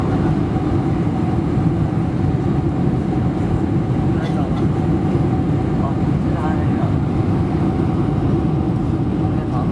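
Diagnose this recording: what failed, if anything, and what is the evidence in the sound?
Nothing in the signal points to a failure at any stage, as no dropouts, clicks, level jumps, distortion or timing irregularities can be heard anywhere in the recording.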